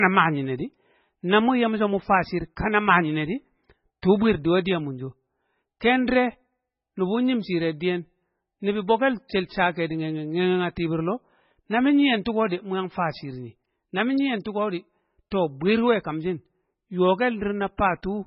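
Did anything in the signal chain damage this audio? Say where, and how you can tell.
Yes, at the codec stage, throughout: the speech cuts off above 5.6 kHz and sounds watery. This is likely heavy MP3 compression near 16 kbps, which drops weak frequency lines.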